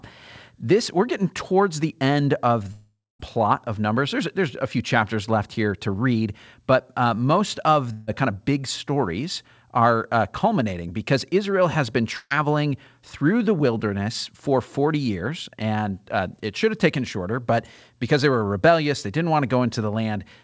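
From 2.72 to 3.21 s, after "towards the end of", the sound smears into a fading buzz, then about 0.23 s of silence before "plot of"; a long network dropout likely lost about 480 ms. At 7.93–8.09 s (after "but uh most of") and 12.17–12.32 s (after "has been"), a burst of packet loss briefly stretches the last sound into a dying buzz, skipping about 140 ms each time, the second with a short silence. Throughout, the G.722 call path leaves nothing above 8 kHz.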